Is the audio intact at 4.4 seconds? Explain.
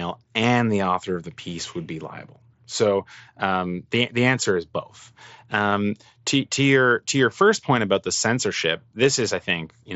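No. Concealed Bluetooth headset packet loss occurs at 4.44 s. About 15 ms of audio, which fits two consecutive lost headset frames, never reached the phone. The receiver filled the gap by repeating the best-matching stretch of the preceding 20 ms or so of waveform. The result is a very brief buzzy, slightly tonal patch held at full level, followed by a faint warble as the real signal resumes, set against the light graininess of the mSBC wideband link.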